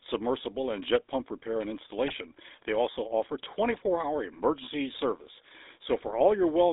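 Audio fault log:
Throughout: GSM full-rate codec. The speech has that gravelly, buzzy roughness you get when a vocal-tract model is driven by a sparse pulse excitation, and it's plainly audible here. The band sits around 250 Hz to 3.7 kHz, so it's thin, with nothing up top. The level points to the 13 kbps full-rate coder.
2.05–2.15 s, 3.74–3.83 s, 6.06–6.17 s: GSM bit errors. Three short bursts of about a tenth of a second each, where the speech squawks and gargles. Corrupted bits are hitting the filter, pitch and gain parameters, so a handful of frames get a warped spectrum or a jump in level. The last burst has a lower bit error rate, about 0.7% against roughly 1.7–1.8% for the first two.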